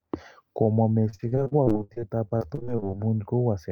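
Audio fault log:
1.09–2.95 s: repeated packet loss (robotic sound). The speech turns choppy, with pieces dropping out, across 24 gaps up to 49 ms each. Lost or late packets kept leaving holes, each patched by stretching the last sound, so about 27% of this stretch is filler.
2.97–3.22 s: jitter buffer slow-down. The speech drags, drawn out at its normal pitch and running at about 84% speed. The receiver was rebuilding its reserve by repeating single pitch periods, adding 47 ms over this short span.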